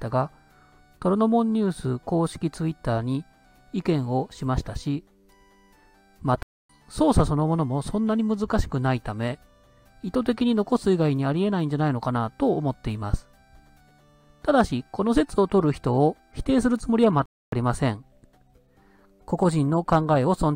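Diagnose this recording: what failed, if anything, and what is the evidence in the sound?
Playback stall: the sound drops to silence for about 0.27 s at 6.43 s and again at 17.26 s. The player was likely starved of data.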